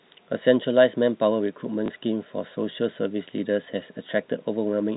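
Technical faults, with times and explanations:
1.86 s: packet loss with last packet repeated. About 20 ms went missing, which fits one lost packet, and the previous chunk was replayed, giving a small blip. The waveform shows a copied segment.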